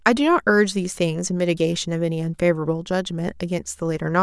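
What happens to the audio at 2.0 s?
Nothing goes wrong at 2.0 s; the speech runs through that moment intact, with no dropout, click or distortion.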